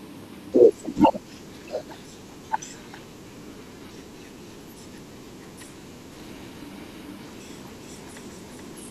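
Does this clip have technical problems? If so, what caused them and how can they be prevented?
Yes. From 6.12 s to the end, a doubled audio track appears: a second, full-band copy of the speech trails by around 400 ms, roughly 5 dB quieter, starting abruptly with no reverb tail. Likely cause: a slower duplicate capture path mixed back in. Prevent it by routing each source through a single capture path and monitoring for duplicate inputs.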